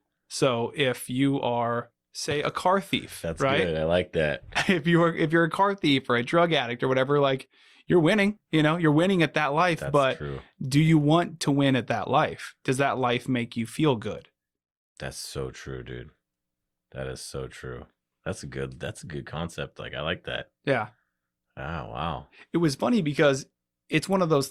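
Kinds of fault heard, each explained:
No kinds of fault are heard in this speech clip.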